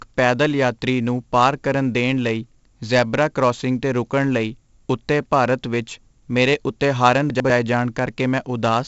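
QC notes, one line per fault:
Throughout: 4-bit ADPCM compression. Each sample is coded as a small 4-bit step from a predicted value, and the step size adapts as the speech moves. The coding error is a broadband grit that rises and falls with loudness, so every loud syllable carries a rough hiss. Damage is heavy, with smearing on sharp onsets where the step lags behind. Nothing reaches above 7.7 kHz, so the speech sounds dull. This fits a 64 kbps stream.
7.3 to 7.5 s: chunks out of order. Just after "ਵਿੱਚ ਮੇਰੇ ਉੱਤੇ ਹਾਰਨ", two 100 ms blocks of speech swap places. One block arrives one slot late and plays after the block that should follow it. No audio is lost, but the sequence is wrong for about 0.2 s. Three abrupt joins create the break. The result is a short jumbled moment.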